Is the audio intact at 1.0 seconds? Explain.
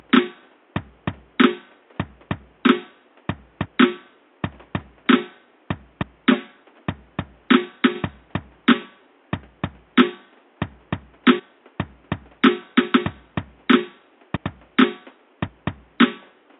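Yes, the music plays through cleanly at 1.0 seconds, with no audible fault at that moment.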